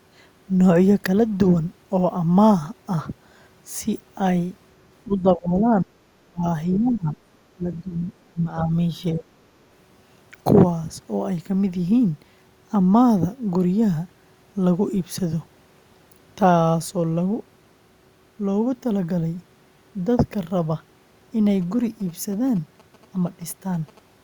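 From 5.06 to 5.93 s, and again at 6.26–6.44, 6.78–7.14, 7.53–8.06, 8.22–8.74 and 9.13–9.42 s, the speech dips by as much as 35 dB or so and partly drops out. It's speech suppressed in double talk, likely because the echo canceller couldn't separate the talker from loudspeaker echo and turned both down. Briefly, at 6.74–6.78 s, a faint scrap of the other side's voice leaks through, well below the talker, most likely echo the canceller missed. From 21.62 to 23.99 s there's a quiet galloping dit-dit-dit of short 217 Hz buzzes, which is GSM signalling bursts from a nearby 2G phone being rectified by the audio circuit.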